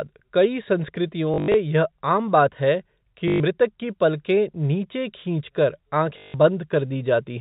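Packet loss with the last packet repeated strikes at 1.34 to 1.54 s, 3.28 to 3.40 s and 6.18 to 6.34 s, losing 140, 120 and 160 ms of sound. At each gap the receiver replayed the most recent packet until fresh audio arrived. The loops, which fit 20 ms packets, ignore the speech's pitch cycle, so runs buzz near 50 Hz, a brief robotic stutter heard through the 4 kHz-limited G.711 telephone band.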